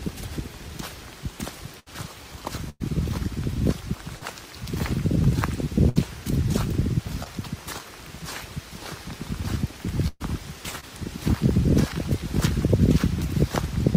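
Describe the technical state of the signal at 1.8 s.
At 1.8 s a burst of packet loss runs from 1.79 to 1.89 s. About 60 ms of audio never arrived, so the receiver extended the last sound for roughly 70 ms while fading it, heard as a dying buzz or hiss before the audio jumps ahead.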